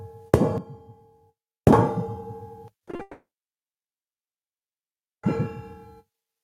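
A recording of everyday sounds, and gain pumping runs through all of it. The level swings by roughly 15 dB. Loud and quiet moments end up too close together, so the sound is flattened and squashed. The likely cause is input gain set far too high for the microphone, with a fast limiter or compressor pulling it back down on every peak. There is also a sudden gain jump at 0.58 s. Sound and background drop together by about 12 dB in a single step, with no fade, and can carry a click. The level stays down until 1.73 s, where it steps back up just as abruptly. A digital gain setting applied without a ramp is the likely cause. Near 2.9 s come three bursts of short concealed packet loss. They fall at 2.85 s and 2.91 s, each 20 ms long, and at 2.95 s, lasting 40 ms. Each is a brief smear or wobble rather than a clean gap. The receiver covered each hole by extending the last sound, then blended back into the real signal. 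A very short sound can go missing in these spots. Straight after, at 3.01 s, a long network dropout begins. The last sound is stretched into a fading buzz or hiss for about 0.2 s. After that there is silence for roughly 2 s. Audio returns at 5.25 s, and everything in between is simply gone. A stall in the network path, with nothing arriving, is the likely cause.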